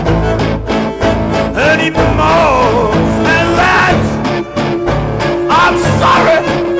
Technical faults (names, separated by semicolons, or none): none